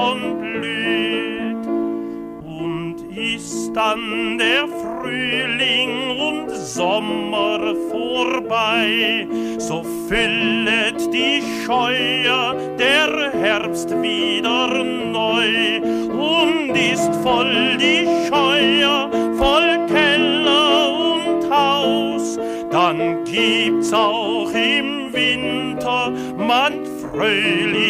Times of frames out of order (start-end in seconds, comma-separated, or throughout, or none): none